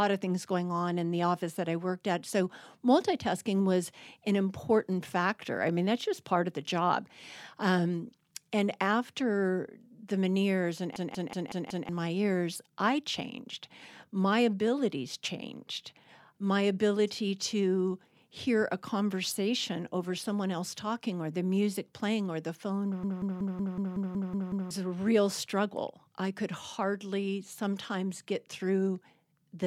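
At 10.96 s and again at 23.03 s, a system hang loop repeats one 186 ms slice, fitting an 8192-sample buffer. It stutters like a machine gun at 5.4 Hz, for 0.93 s and then 1.67 s, with about a second or more of speech lost each time.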